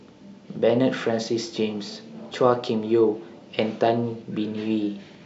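Nothing stood out on listening to the speech here.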